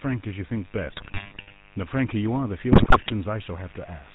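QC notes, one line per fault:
Throughout, mains buzz: a steady, raspy buzz sits about 25 dB below the speech, built on 50 Hz and its harmonics. Switching spikes twice per mains cycle spread energy into the kilohertz range, so it rasps rather than hums like a pure low tone.
Throughout, GSM full-rate codec: the speech has a buzzy, gravelly roughness and nothing above 4 kHz. The codec rebuilds the voice from a vocal-tract model driven by sparse, evenly spaced pulses. The roughness is constant across the clip, unlike the bursts of damage from transmission errors.
0.86–1.57 s and 2.72–3.11 s, GSM bit errors: the speech breaks into squawks, pops and gargling. Corrupted filter, pitch and gain values warp the spectrum or spike the level frame by frame. The second burst has the higher error rate, near 7% against about 3% in the first.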